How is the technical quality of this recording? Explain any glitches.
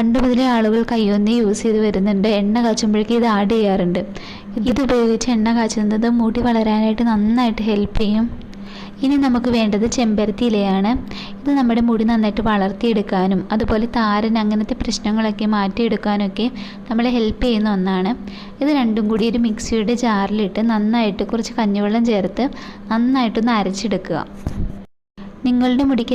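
No audible glitches or faults.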